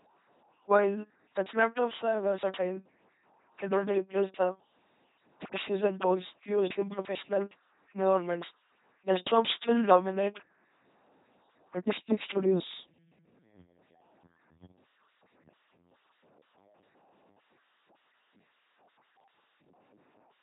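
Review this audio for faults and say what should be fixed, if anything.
The whole recording has been through an LPC-10 vocoder, and the damage is heavy. The speech comes out as a buzzing, mechanical robot voice. Each moment is rebuilt as either a pulse-driven buzz or a burst of noise, shaped by a simple vocal tract filter. Wrong voicing decisions put buzz or hiss in the wrong places. Nothing remains above 3.9 kHz. The sound fits a 2.4 kbit/s link. To prevent this, send or record the speech through a modern wideband codec at a higher bitrate.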